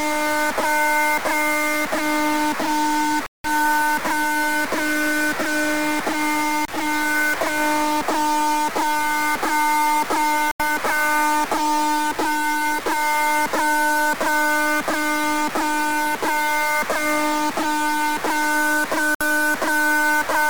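From the first moment to the last, a distortion rides on the sound, and the quieter stretches are filled with a gritty noise floor rather than silence. This points to a stuck bit, likely a single data bit held at a fixed value by a broken line or converter. Roughly half the samples land off by that bit's weight, so the error follows the shape of the waveform. On a spectrogram the pauses show a broadband haze instead of dark gaps. On the waveform the trace looks stepped and offset.

Three dropouts then interrupt playback at 3.26–3.46 s, 10.51–10.61 s and 19.15–19.22 s, going fully silent for 179 ms, 85 ms and 60 ms respectively. These are likely Bluetooth stalls. Interference delayed packets, the receiving buffer ran empty, and playback waited for the resent data before resuming. Each one is heard as an abrupt hole in the audio. The waveform drops flat and the spectrogram shows clean vertical blank bands with hard edges.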